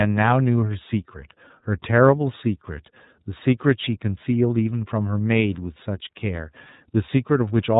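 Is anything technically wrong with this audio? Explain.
Yes. Throughout, the speech carries iLBC codec damage. Each 30 ms frame's excitation is coded on its own, giving a plainly rough, synthetic edge consistent with the 13.33 kbps mode. A spectrogram shows nothing above 3.8 kHz, a flat ceiling across the whole clip.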